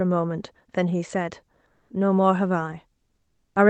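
At 1.73 to 1.89 s and again from 3.15 to 3.55 s, the background is replaced by comfort noise. The real room sound, already about 55 and 51 dB below the loudest speech, gives way to a smooth, featureless hiss, about 4 dB louder in the first gap and about 8 dB quieter in the second. This is likely discontinuous transmission in the Opus codec. Unlike a noise gate, which leaves true silence, or packet-loss concealment, which smears the preceding sound, this fills the pause with a steady synthetic texture.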